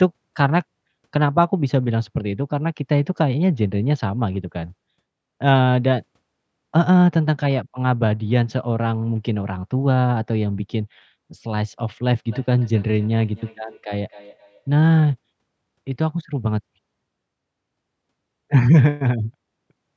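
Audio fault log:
12.27–15.08 s, feedback echo between two devices: the sound keeps coming back at a steady gap of about a third of a second, peaking about 25 dB under the speech. A nearby device is replaying this mic's feed, and the local echo canceller can't touch that.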